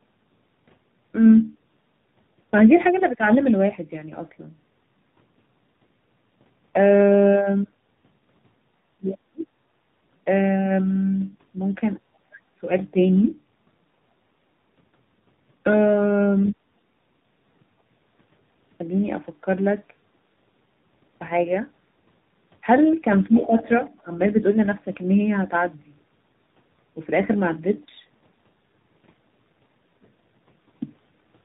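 It's a speech clip with tandem speech coding all the way through: it sounds like several codecs in a row, ending in a low-rate AMR-NB-style coder, which makes it rough, muffled and warbly, with nothing above about 3.8 kHz. Speech suppressed in double talk shows up twice. At 12.0–12.43 s the level drops very deeply, and at 23.29–23.64 s it dips by about 10 dB, likely because the echo canceller turned the talker down while the far end was also speaking. At 23.32–23.67 s the other side's voice leaks through, roughly 10 dB below the talker, likely residual loudspeaker echo the canceller didn't fully remove.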